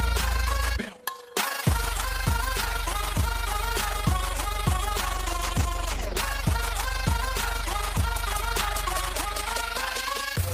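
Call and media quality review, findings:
Overlap-add ripple, throughout: level flutters about 6 dB around 30 times a second. Frame overlap-add in the processing chain doesn't sum to constant gain, causing a rough tremolo.

Call bitrate drop, 5.15 to 6.21 s: audio turns coarse and dulled. Bandwidth estimate fell and the encoder went from 40 to 15 kbps, lowest for about 1 s, losing high-frequency detail.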